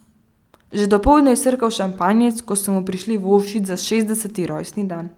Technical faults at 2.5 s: none

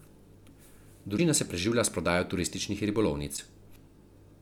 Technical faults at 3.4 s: broken MP3 bit reservoir

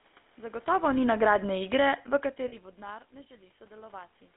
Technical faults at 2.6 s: GSM full-rate codec; automatic gain falling; lost GSM frames

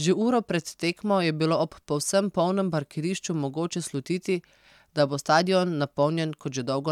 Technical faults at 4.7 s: none

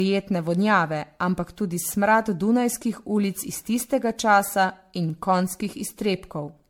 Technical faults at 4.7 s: generation loss

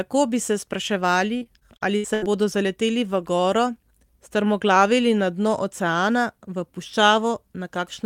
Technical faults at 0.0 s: none

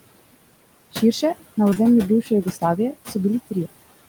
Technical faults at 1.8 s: noise suppressor artifacts; short concealed packet loss

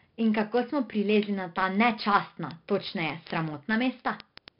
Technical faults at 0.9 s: 4-bit ADPCM compression; word clock ticks

